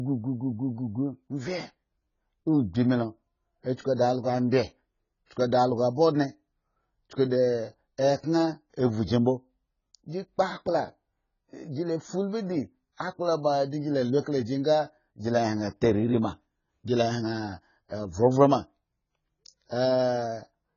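The speech is dull and muffled for the whole clip. Nothing is heard above 7 kHz. Sibilants are smeared and carry a fizzy, warbling edge. Codec damage is heavy. This is likely AAC compression, AAC-LC at a very low rate. The sound fits a bitrate near 16 kbps. At that rate the coder drops the top band. Too few bits remain for the detail below it.

Pre-echo comes at 3.96 to 3.99 s, a 29 ms smear. Again at 5.26 to 5.31 s, 48 ms. Then at 14.20 to 14.26 s, 59 ms, between "la lu" and "ka la gi nga". Each time a short hiss runs just ahead of a sharp onset. The coder spreads its noise across the whole block. So noise meant for the loud attack also fills the quiet moment before it. The attacks sound soft and blurred.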